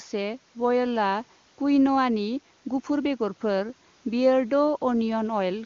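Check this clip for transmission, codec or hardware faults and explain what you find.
Nothing here points to a transmission, codec or hardware fault: the speech comes through the AMR wideband (HD Voice) path as clear, natural-sounding audio that stops at about 7.1 kHz, which fits the codec's highest rate, with little or no audible coding damage.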